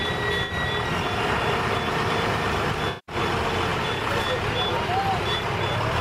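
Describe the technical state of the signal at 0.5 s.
At 0.5 s the sound turns briefly smeared and hazy, with a noisy, phasey quality in place of clean detail, lasting from about 0.43 to 0.53 s. This is AAC frame loss with concealment. Roughly 64 ms of coded data went missing, which fits about three lost frames, and the decoder rebuilt the gap from the last good spectrum with altered phase and estimated energy. That produces a smeared patch rather than silence.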